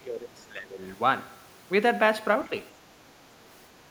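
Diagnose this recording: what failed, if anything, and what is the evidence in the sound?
Call processing failed. From 0.00 to 0.82 s the speech dips by up to about 15 dB. Likely speech suppressed in double talk by the echo canceller.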